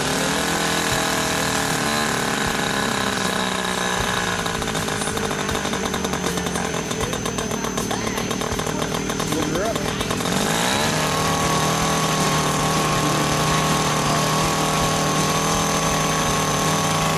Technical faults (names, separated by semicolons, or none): chunks out of order